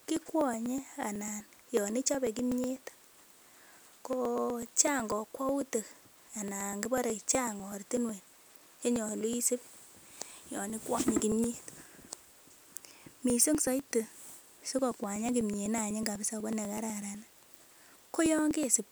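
Speech runs through a steady train of small ticks from 0.17 s to 18.76 s. These are periodic USB or driver dropouts. Something stalls the USB bus or audio driver every 0.124 s, about eight times a second. Each stall drops roughly a millisecond of audio. The gap is skipped, not filled with silence. The waveform jumps at each splice, and you hear a click. About 150 clicks sound across the clip, only where there is signal.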